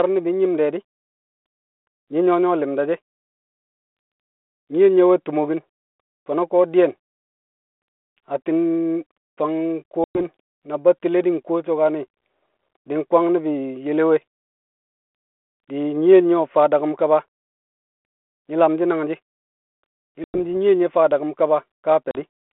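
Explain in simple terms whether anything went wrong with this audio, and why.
Yes, there is packet loss on an ADPCM call. Sound drops to sudden silence at 10.04 s for about 110 ms, 20.24 s for about 100 ms, and 22.11 s for about 40 ms. Afterward the decoder briefly mistracks the signal, giving slightly distorted speech before settling.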